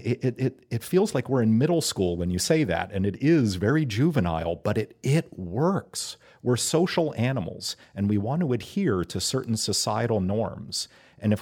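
No technical fault can be heard anywhere in the speech recording; the signal stays continuous and intact for its whole duration.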